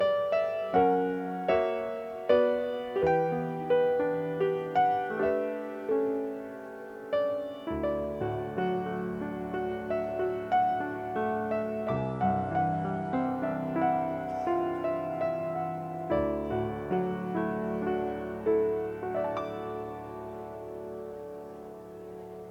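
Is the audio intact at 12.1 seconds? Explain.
No. At 12.1 s the clip is inside a Bluetooth SBC bit pool drop lasting from 11.92 to 13.26 s. The link cut the encoder's bit budget, which fits a fall from about 31 to 15, near 105 kbps, starving the top sub-bands and coarsening the rest, so the treble dulls and gritty noise rises.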